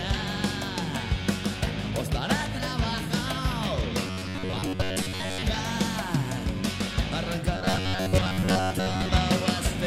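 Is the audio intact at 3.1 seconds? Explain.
Yes, at 3.1 seconds the audio is intact, with no dropout, click, distortion or other technical fault present at that moment.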